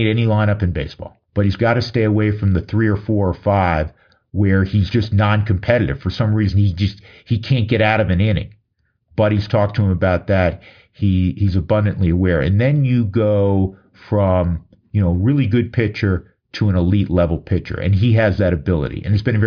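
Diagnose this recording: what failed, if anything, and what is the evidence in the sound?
Nothing in the signal chain has failed: the speech signal arrives continuous and intact, with no audible fault from capture through to playback.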